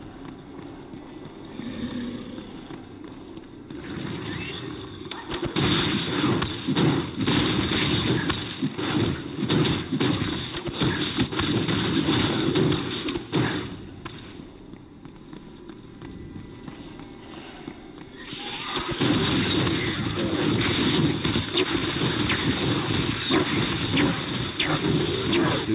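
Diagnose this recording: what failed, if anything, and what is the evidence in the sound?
Nothing stood out on listening; the sound comes through a narrowband call path with nothing above 4 kHz, as expected for a G.711 mu-law link at 64 kbps.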